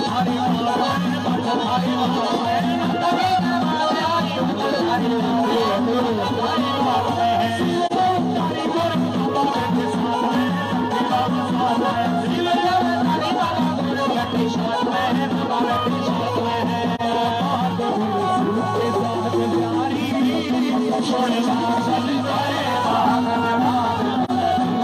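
Three single AAC frames were lost in transmission and the decoder filled each with silence, a case of AAC frame loss with muting. The audio dips into brief soft-edged holes near 7.86 to 7.93 s, 16.95 to 17.01 s and 24.24 to 24.31 s, each about 43 ms long, which fits one missing frame, and the overlapping windows fade the sound out and back in around each gap.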